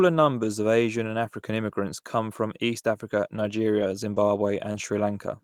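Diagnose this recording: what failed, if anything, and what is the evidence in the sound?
Lost packet rebuilt from error correction at 3.35–3.37, 3.39–3.41, 3.79–3.89, 4.16–4.18 and 4.74–4.76 s. This is a network-stage loss. The Opus decoder played the low-bitrate copy carried in each following packet, so there is no gap, but each 20 ms stretch sounds rougher and noisier.

Short concealed packet loss at 4.14–4.18 and 4.72–4.76 s. About 20 ms of speech missed the decoder's deadline. The receiver extended the preceding sound, either from its pitch or as shaped noise, then blended back. Each one is heard as a brief smear or wobble running into the rebuilt frame that follows.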